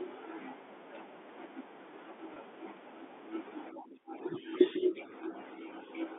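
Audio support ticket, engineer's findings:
Packet loss with pitch repetition, 2.34–2.36 s: brief held, buzzy tone where one pitch period is replayed, consistent with a single lost 20 ms packet concealed by the receiver. Spectrogram: harmonics frozen flat for about 20 ms. Waveform: identical repeating cycles.

Speech suppressed in double talk, 3.71 s to end of clip: talker level dips in patches totalling about 2 s, deepest around 15 dB. Likely echo canceller attenuating near-end speech while far end is active. Spectrogram: energy fades within the 250 Hz–3.6 kHz telephone band. Waveform: envelope pumping down.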